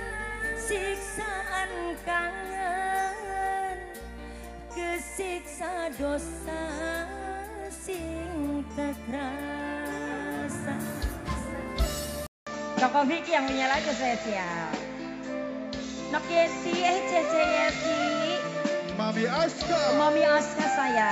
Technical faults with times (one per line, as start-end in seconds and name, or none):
12.27-21.11 input switched to a poorer device